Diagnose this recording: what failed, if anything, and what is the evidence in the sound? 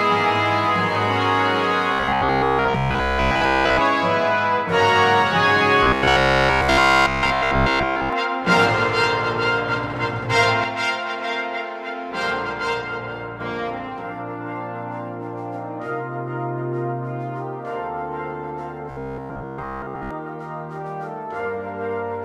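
Robotic sound from repeated short buffers shows up at 1.93–3.82 s, 5.83–8.13 s and 18.91–20.11 s. There's a rigid 66.7 Hz buzz, which fits a 15 ms chunk being looped. That's likely a driver or buffer underrun, with the middle stretch fully replaced.

The sudden gain jump comes at 10.64 s, where level and background noise drop together by about 5 dB with no ramp and stay down until 13.40 s. That most likely points to a digital gain or bit-shift change landing mid-stream in the processing chain.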